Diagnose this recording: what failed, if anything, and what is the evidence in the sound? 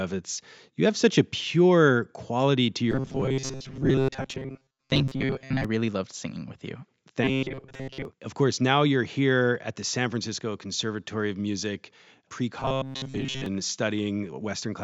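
The speech turns robotic from 2.92 to 5.65 s, 7.24 to 8.05 s and 12.6 to 13.46 s: a rigid metallic buzz at 133 Hz that tracks the syllables only loosely. The stage is the driver or buffer, likely starved of input and looping its last segment. A 133 Hz buzz fits a repeat of about 7.5 ms, with most of the real audio skipped. A codec artefact would warble, not hold one fixed pitch through every vowel.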